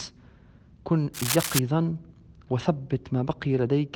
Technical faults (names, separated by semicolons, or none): cable scratch noise